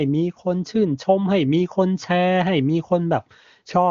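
No technical faults occur in this speech, which is carried by the AMR wideband (HD Voice) codec at a high rate, with nothing above about 7.3 kHz.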